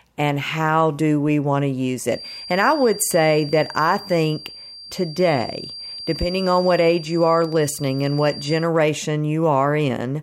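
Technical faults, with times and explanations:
2.05–8.70 s, feedback whistle: just after "we want to use", a thin, steady whistle at 4.7 kHz sets in behind the speech, roughly 15 dB below it, swelling and fading slowly in level but never building up. This is likely a loudspeaker-to-microphone loop held right at the edge of feedback, so a single frequency keeps ringing without running away. On a spectrogram it appears as a sharp horizontal line at 4.7 kHz across the whole span. The waveform shows little change.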